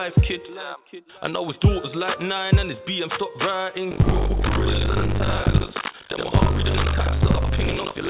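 Buffer tearing runs from 3.9 s to the end of the clip. The writing side and the playback side of the ring buffer have slipped and cross inside each period, so a bit under half of every buffer is audio from roughly a lap earlier, about 70 ms old. The hard joins produce a robotic 50 Hz rattle, which points to periods of about 20 ms.

Short concealed packet loss falls at 5.92 to 5.95 s. About 20 ms of audio never reached the decoder in time, and roughly 12 ms of it was bridged by extending the preceding sound before blending back. It comes through as a brief smear on top of the rattle, within a G.711 band that stops at 4 kHz.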